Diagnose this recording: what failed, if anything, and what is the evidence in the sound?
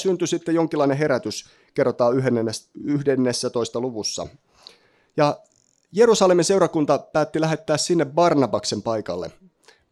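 Nothing failed; no fault is audible in the speech.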